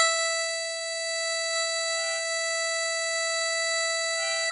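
The music was most likely pushed through a Vorbis encoder at a very low quality setting, and the damage is heavy, consistent with a bitrate in the region of 27 kbps. The encoder kept a smooth spectral outline but quantised the detail above it so coarsely that the treble turns into grainy hiss, and nothing survives above 10.6 kHz. Throughout the clip, tones sound roughened, attacks are smeared, and the top end is dull and noisy.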